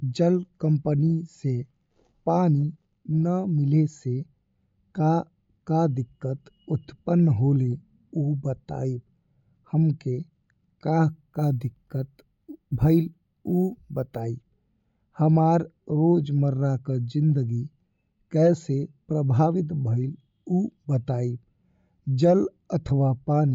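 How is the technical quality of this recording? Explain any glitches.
The recording has one glitch, in the middle of the speech. From 11.09 to 14.20 s there is imaging from sample-and-hold upsampling. The pattern points to 16 kHz audio raised to 48 kHz by repeating each sample without a smoothing filter. This leaves a mirrored copy of the spectrum in the 8 to 16 kHz band, about 31 dB below the speech. It sounds like a bright metallic fizz. Unlike steady hiss, its level rises and falls with the speech, and its lowest copy moves opposite to the pitch.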